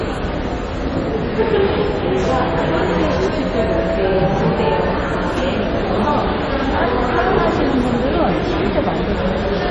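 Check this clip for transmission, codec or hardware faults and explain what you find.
One codec fault runs through the whole clip: heavy damage that is most likely MP3 compression. Nothing is present above 11.2 kHz, and the damage level fits a bitrate around 32 kbps. With so few bits, the encoder chops the treble at a fixed point and drops weak frequency lines that flicker in and out between frames. The result is a watery, swirling texture with metallic chirps and smeared attacks. That swirl sets it apart from a plain low-pass filter, which would dull the sound without adding movement.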